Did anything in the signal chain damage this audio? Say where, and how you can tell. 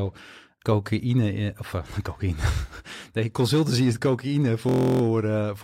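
Yes. From 4.69 to 5.02 s the speech turns into a steady buzz at 43.1 Hz as one 23.22 ms fragment repeats about 14 times. This is a system hang loop at the driver or buffer stage. The host stalled while the hardware kept replaying its ring buffer, which fits a 1024-sample buffer.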